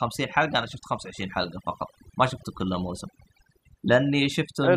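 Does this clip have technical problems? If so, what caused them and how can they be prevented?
Yes, there's overdone noise removal throughout: bands near the noise estimate get pulled right down, so the background twinkles and quiet parts of the speech go with it. Next time, go gentler on the reduction amount.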